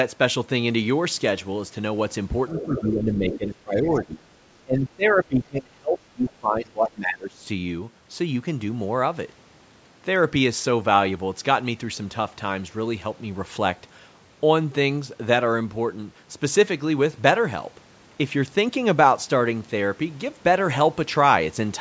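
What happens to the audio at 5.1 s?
The echo canceller likely mistook simultaneous talk for echo between 4.64 and 7.4 s. This is speech suppressed in double talk, pulling the speech down by around 25 dB at worst. At 5.07 to 5.11 s, the other side's voice leaking through likely means residual loudspeaker echo was left in, giving a brief faint scrap roughly 25 dB below the speech.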